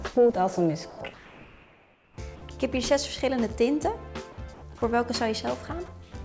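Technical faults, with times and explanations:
0.90 to 0.98 s and 5.86 to 5.88 s, sound dropped by the voice detector: A stretch of sound gives way to steady noise or near silence for 80 ms, then 20 ms. About 30 ms and 10 ms of real sound are lost. The detector likely judged this sound to be background and stopped sending. The receiver filled the gap with comfort noise. The sound returns once the detector triggers again.
1.14 to 2.18 s and 4.54 to 4.62 s, comfort noise in place of the background: In these pauses the real background is swapped for a smooth, featureless hiss, lasting 1.04 s and then 80 ms. The background sits about 29 dB below the loud parts in the first pause and about 22 dB below in the second. The first fill drops about 3 dB. The second keeps the level. The sender likely stopped transmitting when it heard nothing it counted as sound. The receiver then synthesised noise from a rough spectral outline, so the detail vanishes. 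Neither fill reaches above 8 kHz, which fits the G.722 call path.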